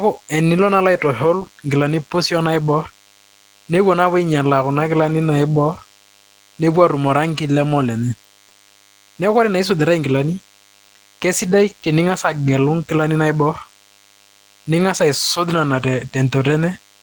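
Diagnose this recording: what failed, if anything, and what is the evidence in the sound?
A thin, steady 100 Hz buzz with many harmonics sits well below the speech throughout. This is DECT cordless phone buzz: 10 ms radio bursts rectified in the analogue wiring.

Throughout, the speech sounds hoarse and slightly robotic. This is Opus voice compression at the codec stage, in hybrid mode, with coarse excitation coding that fits a bitrate near 16 kbps.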